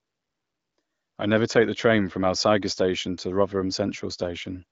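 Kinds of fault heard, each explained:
Nothing stood out on listening to this speech clip.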